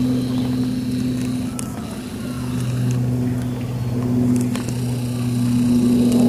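Nothing in this audio stands out as a technical fault; it runs along without any glitch or disturbance worth pointing to.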